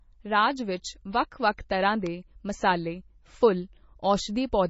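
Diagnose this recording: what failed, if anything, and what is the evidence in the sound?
The whole speech track sounds watery and swirly, with sibilants turning into metallic chirps, consonant attacks smeared, and no content above 7.6 kHz, so the treble stops at a hard ceiling. This is heavy damage at the codec stage, likely from MP3 compression at a very low bitrate, one that fits about 24 kbps. Short of bits, the encoder cut the top band outright and dropped weaker spectral lines that flicker on and off between frames.

At 2.07 s, between "ਵਿੱਚ ਵੱਖ ਵੱਖ ਤਰ੍ਹਾਂ" and "ਮਸਾਲੇ ਫੁੱਲ", a sharp snap sits on top of the speech and lasts only a couple of milliseconds. That points to the analogue wiring stage, with an electrical switching spike as the likely cause: a nearby switch, motor or static discharge arced briefly, and the audio line picked up that burst of energy as an added click.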